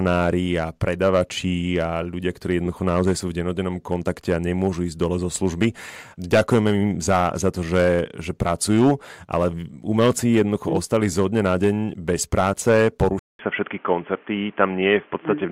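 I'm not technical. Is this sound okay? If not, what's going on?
No. At 13.19 s, after "na deň bez práce", the speech goes silent briefly, then turns dull and muffled. The input likely switched to a poorer device.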